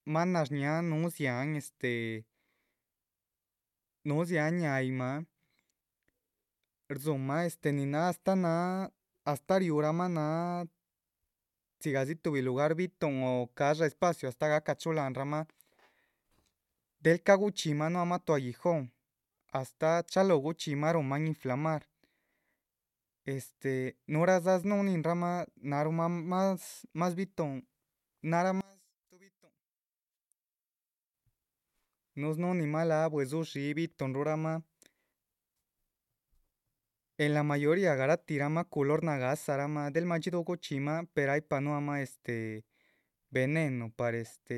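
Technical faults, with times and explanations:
28.61–31.14 s, one channel inverted: the speech suddenly drops by about 28 dB without going fully silent, unlike a dropout. This is likely reversed polarity on one stereo channel, so the centred sound cancels when the channels are summed to mono.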